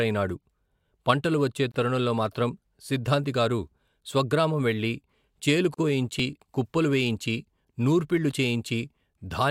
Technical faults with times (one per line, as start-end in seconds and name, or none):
1.72-1.74 gap at a join of encoded pieces
5.74-5.78 gap at a join of encoded pieces
6.19 dropped buffer (overrun)
8.31 dropped buffer (overrun)